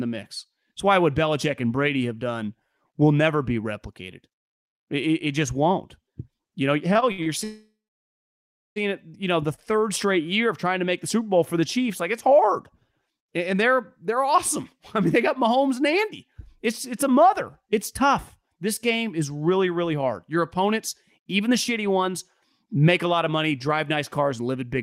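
Speech that catches and drags from 6.93 to 7.28 s, where five brief holds (the longest 63 ms, 146 ms in all) break up the flow so that about 42% of that span is filled-in sound. This is repeated stalls (stutter): packets kept arriving later than the receiver played them, its jitter buffer emptied over and over, and each time it extended the last sound until more audio came in, so nothing is lost but the delivery stumbles. Soon after, from 7.44 to 8.78 s, the speech stops outright. The last sound hangs on as a fading buzz and then goes quiet for about 1.03 s before the talker resumes exactly where they left off. This is a call audio freeze, likely caused by packets being held up in transit long enough to drain the buffer completely. The 1.32 s of filler is added delay, not lost speech. Just after "know the", around 9.56 to 9.73 s, a sound is held slightly too long with a faint buzz. This is a short stall from a late packet: one packet missed its slot, the receiver stretched the previous sound by about 15 ms to cover the wait, and then carried on seamlessly. 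Near the end, the speech becomes noticeably hurried while keeping its pitch, at 105% speed from 21.18 to 22.07 s and at 108% from 22.65 to 24.82 s. This is jitter buffer speed-up: with surplus audio queued after delayed packets arrived together, the receiver repeatedly cut out pitch-period-sized slices to reduce its delay, trimming roughly 50 ms and then roughly 150 ms.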